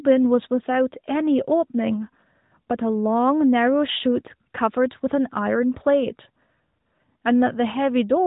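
No faults present in this speech; the AMR-NB narrowband path at 12.2 kbps is working as intended, with nothing above about 3.8 kHz.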